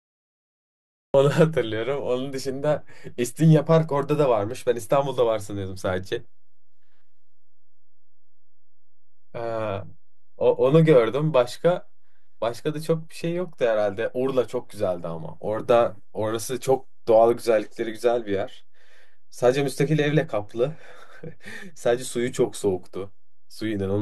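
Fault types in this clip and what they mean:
DC offset: The whole waveform sits shifted away from zero by a constant amount. It can't be heard, but it wastes headroom and adds steady energy at the bottom of the spectrum.
Cut-off start: The speech begins late, with digital silence until 1.14 s. Then the sound enters mid-utterance, with no natural attack or fade-in.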